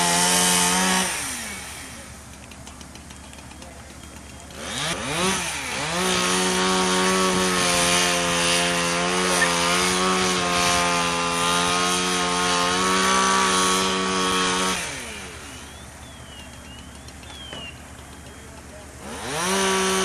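CD scratch ticks run from 13.58 to 15.35 s: a blemish defeats error correction once per revolution, leaving thirteen tiny clicks, about seven per second, each a few milliseconds long.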